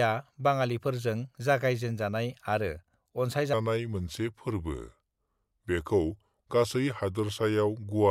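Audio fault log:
3.53–8.10 s section at the wrong speed: playback slows to 0.82x, dropping pitch about three semitones, and the pace slows with it, unlike a pitch shift; likely a clock mismatch.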